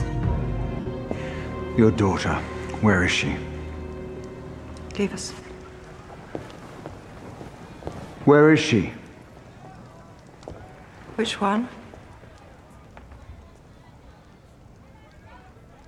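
Lost LE Audio frames break the audio three times: a 60 ms stretch at 0.80 to 0.86 s, and brief losses at 4.16 s and 9.80 s. Rather than silence or a click, each gap fills with a noisy smear as the LC3 decoder replays the last spectrum with scrambled phase.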